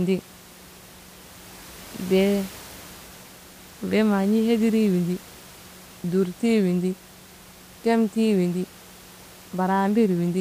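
Nothing goes wrong in the system path here; the only thing in the background is a bit of room noise, sitting about 23 dB below the speech, and that belongs to the recording space rather than to any fault.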